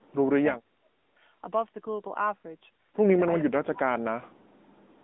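AMR narrowband mobile codec coding runs through the whole speech clip. Nothing above 3.8 kHz survives, the line band sits at roughly 200 Hz to 3.6 kHz, and the pulse-driven vocal-tract model leaves a plainly audible buzzy, synthetic edge that fits a mid-rate mode near 10 kbps. Speech suppressed in double talk shows up at 0.00–0.32 s, 0.61–1.09 s and 3.40–3.81 s, where the voice plunges by about 30 to 40 dB. The likely cause is an echo canceller that could not tell this talker from loudspeaker echo and turned both down.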